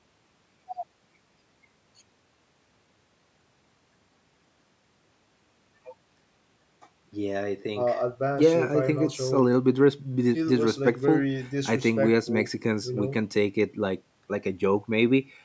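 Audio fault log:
Nothing stood out on listening to the speech, which has passed through call microphone processing that trims the lowest bass and carries nothing above 8 kHz, as expected for that path.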